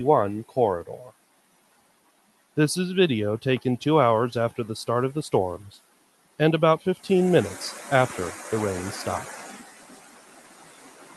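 A speech noise suppressor stays active on this non-speech sound throughout. It treats held tones and tails as noise, so the level swings by around 15 dB and pumps. The sound sinks hardest from 1.09 to 2.57 s, 5.75 to 6.39 s, and 9.46 s to the end, with the suppressor cutting it by about 13 to 14 dB. Sustains fade early there. The Opus call path, which fits roughly 32 kbps, tops out near 12 kHz.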